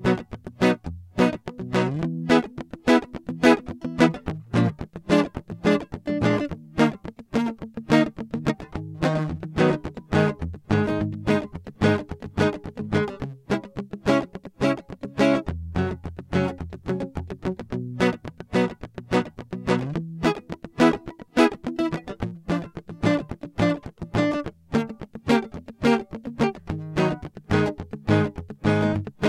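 The music runs without any audible technical fault, with no break, level jump or distortion anywhere in the signal.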